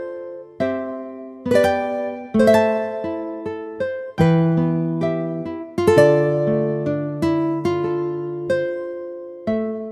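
Nothing in this audio stood out as a technical fault on listening.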